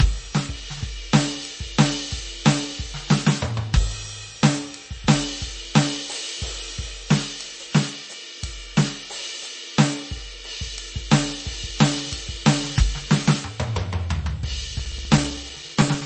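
Music, with heavy data reduction that is likely MP3 compression at a low bitrate around 32 kbps: nothing survives above 8.3 kHz, and the remaining sound turns watery and swirly throughout. Near the end, periodic USB or driver dropouts interrupt the stream every 0.064 s from 14.79 to 16.01 s, punching a few milliseconds of silence each time and producing about twenty evenly spaced ticks.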